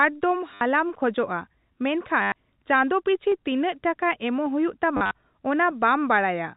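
Packets went missing three times, and each time the receiver repeated the last packet that arrived until fresh audio resumed. This is packet loss with the last packet repeated. The first gap runs from 0.54 to 0.61 s (70 ms), and the second from 2.22 to 2.32 s (100 ms), just before "ᱪᱟᱸᱫᱚ ᱯᱤᱪᱷᱤ". The repeated segments don't align with the pitch cycle, so the held sound buzzes, which fits roughly 10 ms packets and a buzz near 100 Hz. At 3.32 s, just after "ᱪᱟᱸᱫᱚ ᱯᱤᱪᱷᱤ", and again at 4.47 s, a single sharp click appears. These are likely dropped samples: a tiny fraction of a millisecond is missing, so the waveform jumps abruptly without losing any audible sound. The third stretch of packet loss runs from 4.97 to 5.11 s, with 90 ms lost over 140 ms. The longest run is 50 ms, which makes a broken, robotic stutter. All of this sits on top of narrowband G.711 telephone audio.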